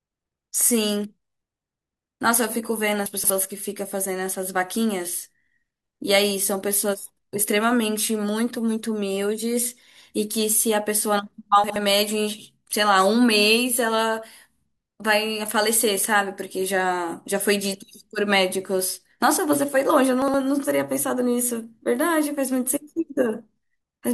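Three spots of chunks out of order in this speech. From 3.06 to 3.3 s, one 60 ms chunk turns up three chunks late, so it plays after the sections that should follow it. At 11.64 to 11.76 s and again at 20.22 to 20.34 s, a chunk lands just one slot late, so two neighbours swap. Nothing's missing, but each spot sounds briefly jumbled.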